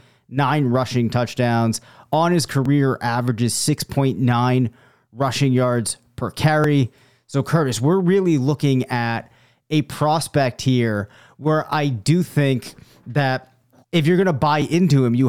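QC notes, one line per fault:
2.66, 6.64, 10.63 and 14.62 s: audio missing between chunks. Four abrupt skips, evenly spaced about 4 s apart, the third between "looking at a prospect" and "here where I do". Each drops roughly 10 ms and butts the two sides together, likely from losing samples at every 4-second chunk boundary.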